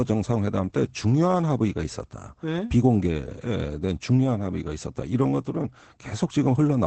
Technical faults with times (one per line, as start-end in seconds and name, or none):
0.00-6.86 Opus voice compression